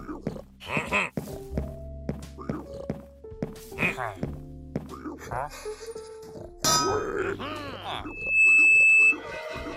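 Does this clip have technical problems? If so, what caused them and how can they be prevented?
Yes. From 5.06 to 7.18 s there is channel delay (comb filtering): one channel lags the other by around 0.15 ms, and summing them cancels a series of evenly spaced frequencies starting near 3 kHz, giving a hollow, phasey tone. Keep both channels time-aligned before any mono fold-down.

From 8.06 to 9.18 s a loudspeaker feedback squeal appears: a microphone picks up its own loudspeaker, and a 2.6 kHz tone builds in under half a second to roughly 15 dB above the sound. Lower monitor gain, reposition the microphone, or notch that frequency.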